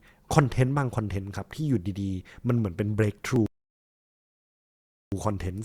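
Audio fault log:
0.36–3.36 s clock drift buffer slips: about four clicks at steady 1.0 s intervals, likely mismatched clocks dropping or repeating small sample blocks; thin vertical spectrogram lines.
3.46–5.12 s rebuffering stall: playback halts into silence, adding 1.66 s, then resumes exactly where it stopped; flat waveform gap, blank spectrogram stretch.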